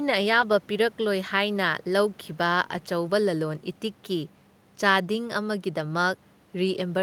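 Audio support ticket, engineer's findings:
Brief rough, grainy patch at 0.41 s and again at 2.77 s, each about 20 ms, no dropout or silence. Lost packet rebuilt from error correction. Each event fits a single lost 20 ms packet. The decoder replayed the low-bitrate redundant copy carried in the following packet (Opus in-band FEC), so the stream stays continuous but those frames come out coarser and noisier than the surrounding speech. Probable component: network path and jitter buffer, with the decoder's FEC recovery audible.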